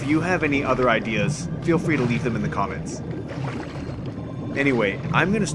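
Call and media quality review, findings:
No faults found. No dropouts, distortion or level problems to report.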